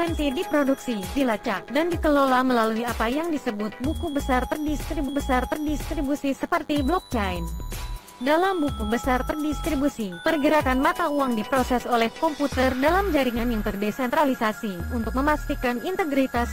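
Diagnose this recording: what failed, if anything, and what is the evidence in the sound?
The failure is in the analogue stage: a DECT cordless phone buzz runs through the whole recording, a thin, steady buzz sitting about 30 dB below the sound. A nearby handset or base transmits a radio burst every 10 ms, and the audio circuitry rectifies it into a 100 Hz pulse train. A spectrogram shows a comb of horizontal lines at 100 Hz and its many harmonics, and the waveform shows small spikes repeating every 10 ms.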